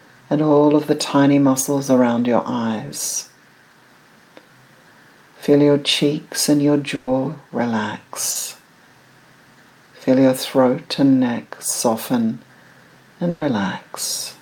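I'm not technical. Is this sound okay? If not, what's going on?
No. Around 6.95 to 7.09 s and again at 13.29 to 13.43 s there is a burst of packet loss. About 120 ms of audio never arrived, so the receiver stretched the last sound into a fading buzz or hiss, then jumped ahead with that stretch missing.

At 8.31 to 8.37 s there is a short concealed packet loss. Only about 40 ms went missing, so the patch is brief and blends back in. It is heard as a quick smear or wobble rather than the longer held, fading sound of the two bursts.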